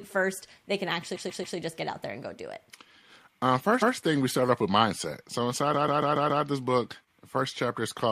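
Speech with two stutters from repeated frames: a block of about 139 ms is played again three times from 1.14 to 1.56 s, after "first they can" and before "just get out there", and five times from 5.73 to 6.43 s, after "off with mindset so" and before "this book". The block length fits a short run of compressed frames being sent more than once. On a spectrogram or waveform, each stretch shows the same pattern copied side by side, and the repeats lengthen the audio by about 0.42 s and 0.70 s.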